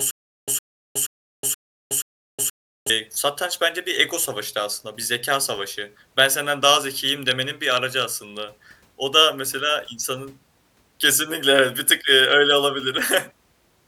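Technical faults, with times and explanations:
0.00–2.90 s, stutter with silent gaps: the clip opens already caught in it. A speech fragment about 110 ms long plays five times, each followed by roughly 368 ms of dead digital silence, so the burst returns every 477 ms or so. The likely cause is a stalled stream replaying its last buffered piece at each retry and then running empty. The strict repetition of identical audio is what separates it from random dropouts, and the true silence between bursts is what separates it from a seamless loop.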